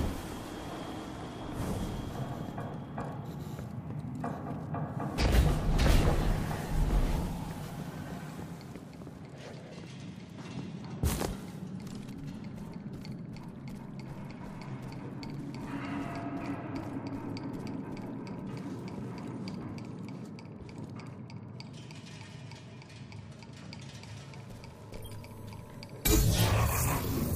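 Wi-Fi interference runs through the whole clip: a nearby Wi-Fi radio's beacon, sent every 102.4 ms, is being picked up and rectified by the audio circuit. The result is a steady ticking just under ten times a second, sitting roughly 40 dB below the sound.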